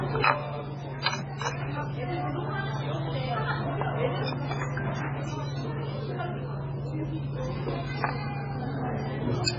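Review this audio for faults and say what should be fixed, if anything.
The whole clip sounds watery and swirly, with attacks smeared and nothing above 7.6 kHz. This is likely heavy MP3 compression at a very low bitrate, around 16 kbps: the encoder cut the treble and zeroed weak frequency lines that flicker between frames. Encode at a much higher bitrate, or keep an uncompressed master and re-export from it.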